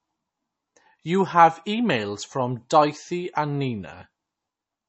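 From start to finish the speech carries plainly audible MP3 compression damage, likely from a starved low-bitrate encode, which fits something around 32 kbps. Nothing survives above 7.9 kHz, so the top end sounds dull, and weak frequency lines flicker in and out, leaving a watery swirl.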